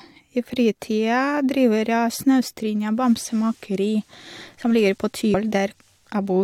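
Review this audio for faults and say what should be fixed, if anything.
At 5.33 s there is a brief glitch in the speech, caused by damaged data in the compressed stream. The decoder misreads the corrupted frame, loses sync and resumes at the next valid header. To prevent it, verify checksums and retransmit or re-encode corrupted segments before delivery.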